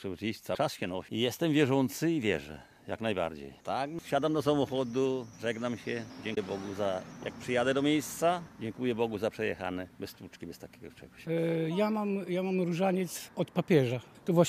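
A broken MP3 bit reservoir is the likely cause of two brief glitches, from 0.54 to 0.57 s and from 6.34 to 6.38 s. At each point the sound jumps forward, with a glitch lasting roughly one to two frame lengths, which fits MP3 frames of about 26 ms. A frame after a cut in the stream reached back for borrowed data and decoded bytes belonging to a different frame instead.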